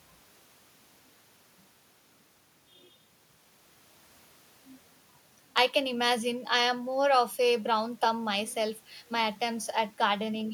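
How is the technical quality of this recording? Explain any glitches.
No glitches can be heard anywhere in the recording. The speech runs without a single technical fault to explain.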